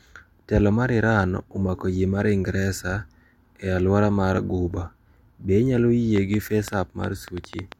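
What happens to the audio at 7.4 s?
At 7.4 s the speech sits under a train of clicks: sharp, similar pops, about 7 per second at an uneven pace, roughly ten in all from 6.16 to 7.73 s, some around 10 dB above the speech. They likely come from interference or a faulty connection or power supply injecting pulses.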